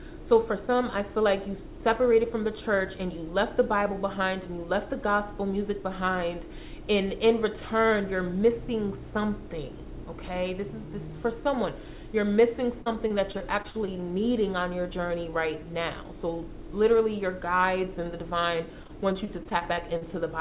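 Call audio, band-limited to 4 kHz through a G.711-style path, with two bursts of repeated packet loss (robotic sound), from 12.82 to 13.89 s and 18.83 to 20.03 s. Short dropouts of up to about 40 ms are patched by stretching the previous sound, making about a sixth of each stretch choppy.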